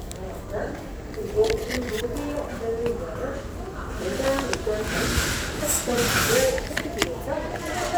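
A recording of sounds, with no technical fault to be heard anywhere in it. Nothing in the audio points to a problem in how it was captured or delivered.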